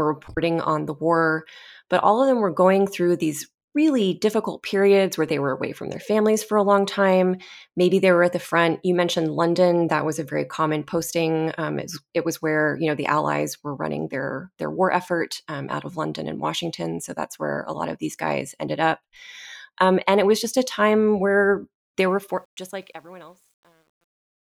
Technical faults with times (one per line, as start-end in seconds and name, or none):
22.09-24.40 truncation distortion on a fade